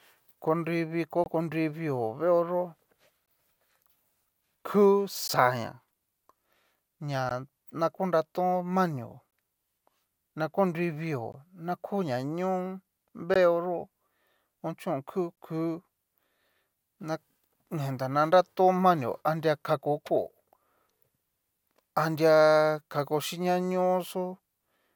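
Gaps at joins of encoded pieces occur from 1.24 to 1.26 s, then at 3.26, 5.28, 7.29, 9.31, 11.32, 13.34 and 15.36 s, recurring about every 2 s. The speech was encoded in separate segments and spliced untrimmed, so each encoder's start-up delay and final-frame padding remain as silence: about 21 ms at the first join and 16 ms at the rest. Each is a brief dropout with its edges smeared by the codec, after which the speech resumes where it stopped.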